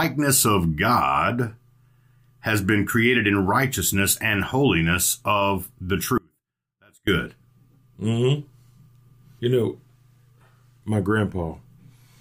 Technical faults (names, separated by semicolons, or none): audio dropout to a faint residue